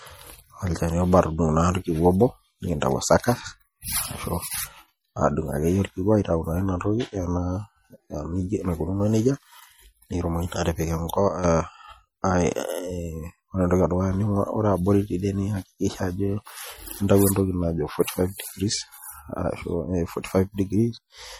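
From start to finish the speech shows plainly audible codec damage, most likely from MP3 compression at a low bitrate, which fits something around 48 kbps. With so few bits per frame, the encoder drops weak frequency lines that switch on and off between frames. The result is a watery, swirling texture on the voice, metallic chirping on s sounds, and smeared consonant onsets. Nothing remains above 20.6 kHz.

From 11.28 s to 11.44 s there is a sudden gain jump. The level falls by about 8 dB in a single step, and the voice and the background noise drop together. That points to a likely digital gain change applied between one sample and the next with no ramp. Because the step is instantaneous, it is heard as an abrupt change in loudness rather than a fade, and the noise floor shifts at the same instant as the speech.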